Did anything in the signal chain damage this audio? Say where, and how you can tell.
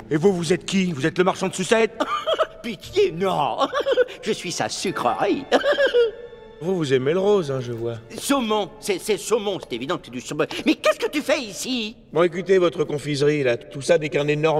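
No, nothing in the signal chain audibly damaged this audio. Listening closely, no stage leaves a mark on the sound.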